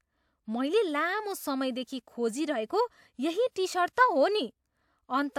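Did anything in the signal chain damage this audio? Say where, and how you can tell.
No, nothing along the way seems to have damaged this speech recording, so there's no stage to point to.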